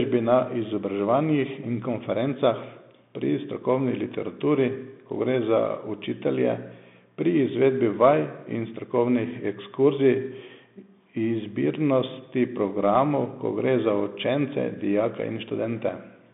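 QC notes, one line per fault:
Throughout, Bluetooth CVSD headset codec: speech is held to a 150 Hz to 3.6 kHz telephone band with nothing above 3.8 kHz. The adaptive one-bit up/down coding, consistent with a 64 kbps headset link, leaves plainly audible granular hiss, scratchy s sounds and overload distortion.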